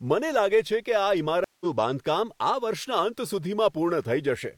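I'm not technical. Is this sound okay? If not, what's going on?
No. At about 1.44 seconds the connection carrying the audio dropped, and the player had to reconnect and start decoding again partway through. This is a stream reconnect. You hear a gap of silence lasting about 0.16 seconds, ending around 1.65 seconds. When the speech comes back, it picks up slightly later than where it stopped, roughly a sixth of a second on, so a small piece of the speech is skipped.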